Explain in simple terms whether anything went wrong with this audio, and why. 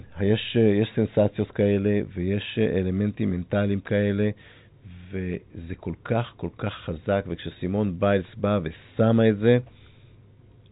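Nothing here went wrong.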